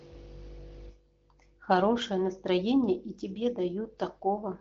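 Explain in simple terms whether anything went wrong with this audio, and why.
Nothing went wrong with this audio; the speech simply passes through an HD Voice phone codec as intended.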